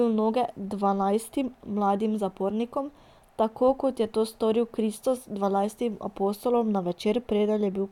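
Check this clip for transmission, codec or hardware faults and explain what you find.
No transmission, codec or hardware faults are audible anywhere in this speech recording.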